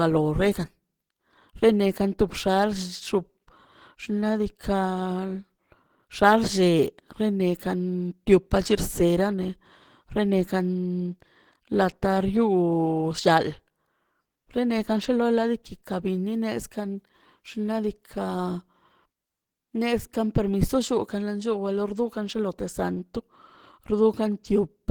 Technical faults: Opus compression

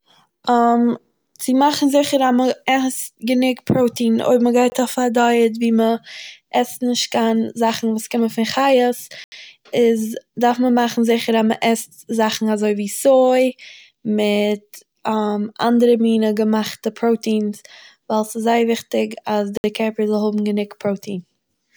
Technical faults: block of digital silence

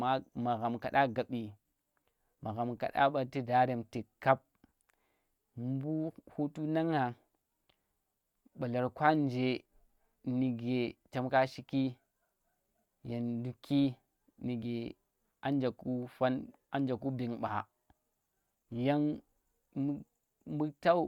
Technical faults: none

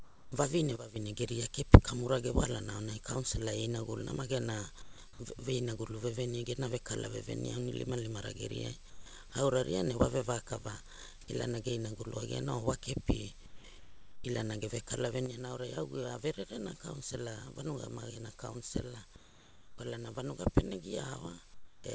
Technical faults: sound dropped by the voice detector; sudden gain jump; sound chopped by the voice detector; comfort noise in place of the background

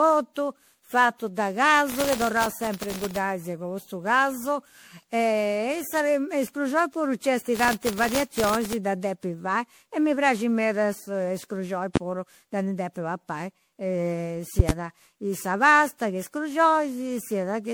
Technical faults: generation loss; processor overload crackle; loud pop

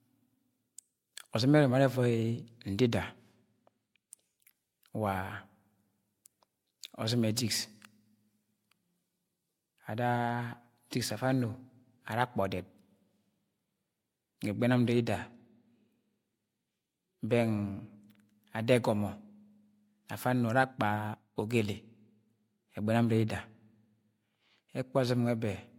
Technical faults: none

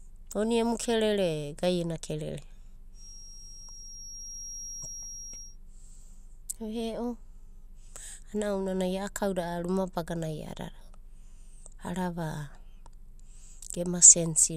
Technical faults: feedback whistle

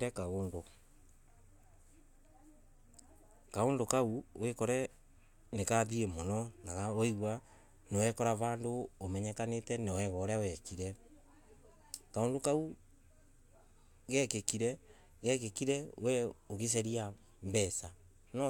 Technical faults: none

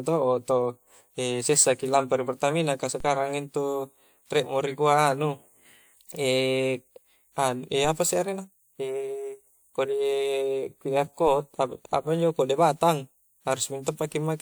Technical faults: DC step

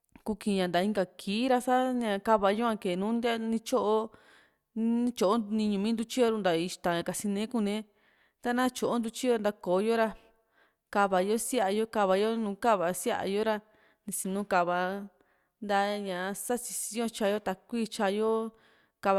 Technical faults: none

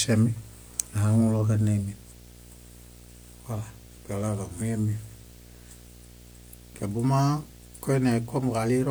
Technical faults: video or display buzz

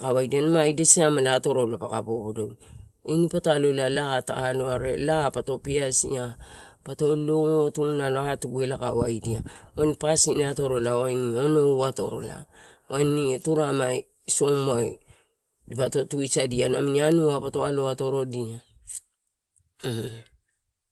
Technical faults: short stall from a late packet

